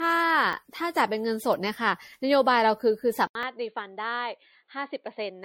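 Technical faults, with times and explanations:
Throughout: generation loss. The speech sounds swirly, smeared and hollow, with blurred consonant onsets, likely from being re-encoded as 64 kbit/s MP3 about seven times. On a spectrogram, speckled holes and smearing run through the upper bands.
0.53 s and 3.43 s: dropped buffer (overrun). Each is a small jump forward in the speech, with no gap. The audio likely skips roughly 10 ms at the first and roughly 20 ms at the second because samples were overwritten before collection. The waveform shows a discontinuity at each point.
3.27 to 5.44 s: input switched to a poorer device. After about 80 ms of silence, the speech comes back roughly 10 dB quieter and dull, with a boxy tone and a faint new noise bed around 50 dB down. This is likely a change to a narrower-band microphone. On a spectrogram, the upper frequencies thin out from the switch onward.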